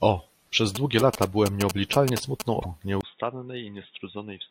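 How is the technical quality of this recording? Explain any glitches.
The recording has three distinct technical faults, one after another, and they affect most of the speech.

From 0.75 to 2.42 s there is interference from GSM signalling bursts. A nearby 2G phone is exchanging short radio bursts with the network. The audio circuitry rectifies them into sound. They repeat at 217 Hz. The result is a galloping dit-dit-dit of short buzzes. It sits only a little below the speech, so it is hard to ignore.

From 2.60 to 2.66 s there is damaged data in a compressed stream. Part of the encoded data was corrupted. The decoder could not read those frames, lost sync and had to search for the next valid frame header. This produces a brief glitch of about 55 ms.

At 3.01 s the sound changes to the end of the clip. There is a 20 ms gap. After it, the speech is dull and boxy, with nothing above 3.8 kHz. 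The level drops by roughly 10 dB, and a faint new background noise appears. The input was likely switched to a poorer device, such as another microphone or a headset's call profile. That device passes a narrower band and has its own tone and noise.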